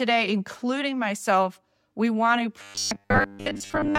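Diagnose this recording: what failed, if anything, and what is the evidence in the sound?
Buffer starvation likely caused robotic sound from repeated short buffers: after "myself we want to", from 2.62 s to the end, speech becomes a rigid 100 Hz buzz, fitting repeated 10 ms chunks.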